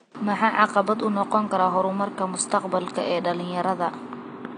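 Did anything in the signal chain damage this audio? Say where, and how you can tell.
Yes. Throughout the speech the top end sounds dull and smeared, with a fizzy, warbling texture on sibilants and sustained sounds. That points to the codec stage, likely AAC compression at a low bitrate such as 32 kbps AAC-LC, which narrows the bandwidth and leaves holes in the spectrum. The room noise sits about 40 dB below the speech.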